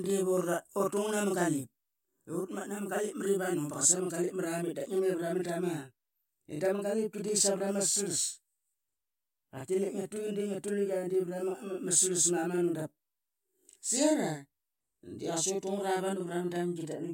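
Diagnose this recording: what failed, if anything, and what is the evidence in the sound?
Channel delay (doubling) runs through the whole speech recording, from start to finish. Every syllable is followed by a second copy at equal level 40 ms later, heard as a tight slap or a doubled, hollow attack on consonants. The failure sits at the driver or buffer stage: one channel was held back by an extra buffer's worth of samples, and when the two channels were summed to mono the late copy landed as a distinct repeat instead of reinforcing the first.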